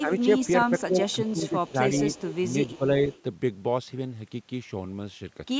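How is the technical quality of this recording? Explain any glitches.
The recording has two recurring call-path faults: speech suppressed in double talk and echo leak. Both come from a hands-free call's echo control. The audio is band-limited with nothing above 8 kHz, consistent with call microphone processing.

Speech suppressed in double talk occurs at 0.00–0.11 s, 0.87–1.78 s and 2.76–2.85 s. The level dips by around 10 dB in short bursts totalling roughly 0.7 s in the middle stretch and a tenth of a second at each of the other two. The likely cause is the echo canceller failing to tell near-end speech from loudspeaker echo while both sides talked, and attenuating everything. The voice sounds pushed down.

Echo leak appears at 0.43–0.48 s, 1.09–1.49 s, 1.96–2.79 s and 3.11–3.22 s as a faint delayed copy of the voice trailing the original by 333 ms. It sits about 15 dB below the speech in the two longer passages, about 20 dB below at 0.43 s, and about 30 dB down at 3.11 s. 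This is likely residual loudspeaker pickup the canceller did not fully remove, heard as a delayed repeat.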